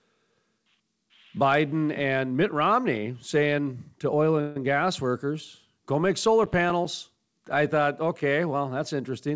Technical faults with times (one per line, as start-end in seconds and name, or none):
4.41-4.57 call audio freeze
6.44-6.85 processor overload crackle